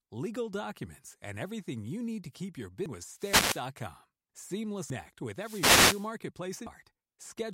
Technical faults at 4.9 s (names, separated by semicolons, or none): damaged data in a compressed stream